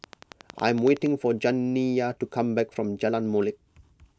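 From 0.04 s to 1.07 s a train of clicks runs over the speech: short pulses of near-identical shape at a steady 10.8 per second, around ten in all, each peaking a few decibels above the programme level. They read as a rapid, even ticking that stays audible between syllables as well as on top of them. The regular spacing and repeated shape point to a likely cause in electrical interference from nearby equipment or a faulty connection or power supply.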